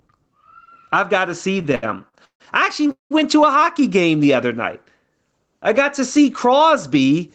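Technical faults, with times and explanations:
Throughout: gain pumping. The gain swings by roughly 10 dB, likely from gain set too high with a fast limiter pulling it down on each loud sound. The waveform looks flattened, with peaks evened out in height.
1.59–2.42 s: repeated stalls (stutter). Seven separate stalls drag the speech, with 325 ms of stretched sound filling about 39 percent of the span, the longest hold 149 ms. Late packets kept emptying the jitter buffer. A spectrogram shows repeated smeared, frozen bands.
2.87 s: short stall from a late packet. One sound is held 21 ms too long while the receiver waits for a late packet, then resumes from the same place. Nothing is lost. On a spectrogram this appears as a brief horizontal smear, with a tiny flat stretch in the waveform envelope.
2.91–3.12 s: call audio freeze. The last sound is continued as a fading buzz or hiss, then about 140 ms of silence, 195 ms in all, likely from packets held up on the way. 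Speech then picks up where it stopped. The waveform shows a tapering tail into a flat gap.
5.69–7.29 s: jitter buffer speed-up. To shed excess delay, the receiver cut roughly 100 ms of pitch-period slices, so speech runs at 106 percent speed with unchanged pitch and sounds slightly hurried. The spectrogram shows syllables compressed in time, harmonics at unchanged spacing.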